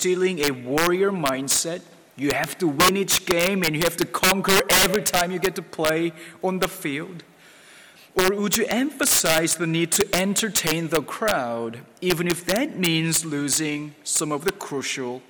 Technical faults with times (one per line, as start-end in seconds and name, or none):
0.00-15.29 integer overflow